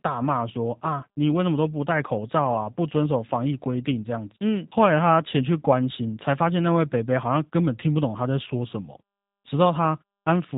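From start to finish, the speech carries the sound of the G.729 codec, a low-rate VoIP coder whose character fits 8 kbit/s operation. Rather than storing the waveform, it resynthesises each 10 ms frame from a vocal tract filter, a pitch predictor and a sparse set of pulses, so the voice takes on a plainly audible rough, synthetic texture. The band is also cut off, with nothing above about 3.8 kHz, leaving the speech narrow and muffled.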